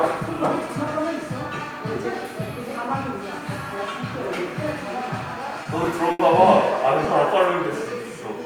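From 5.63 to 6.21 s the sound hits repeated stalls (stutter): four brief holds, the longest 80 ms, where late packets drained the playback buffer and the last sound was stretched to cover, filling about 120 ms. Unlike packet loss, nothing is skipped; the audio just drags and hiccups.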